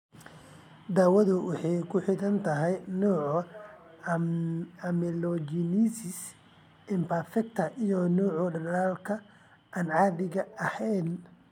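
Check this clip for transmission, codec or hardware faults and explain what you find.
Nothing in the speech points to a fault at any point. There is nothing to list.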